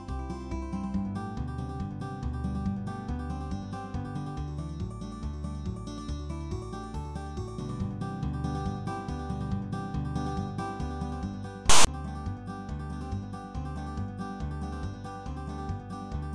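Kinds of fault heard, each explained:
File tags played as audio: from 11.70 to 11.87 s a block of text metadata is decoded as samples, giving a hard-edged rasp offset to one side, then dead silence from zero padding. The waveform shows an abrupt lopsided block then a flat line; the spectrogram shows a broadband smear.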